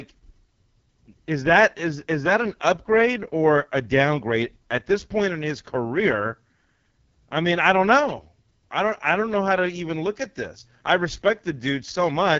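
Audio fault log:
Throughout, AMR wideband (HD Voice) codec. The speech sounds rough and raspy, with nothing above 7.3 kHz. This fits AMR-WB at its lowest rate, near 6.6 kbit/s.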